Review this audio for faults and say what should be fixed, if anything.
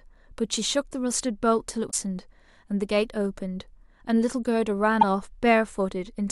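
Damaged data in a compressed stream shows up twice in this speech recording. Corrupted bytes made the decoder misread frames, lose sync and hunt for the next valid frame header. Each time, a brief glitch replaces the speech: from 1.87 to 1.94 s (about 70 ms), and again from 5.01 to 5.04 s (about 25 ms). To prevent it, store and transfer the file through a checksummed, error-checked path, and re-fetch or re-encode it from an intact source.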